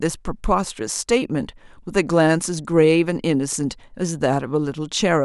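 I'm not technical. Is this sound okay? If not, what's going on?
Yes, this sound is okay, and there's nothing going on with it that needs fixing.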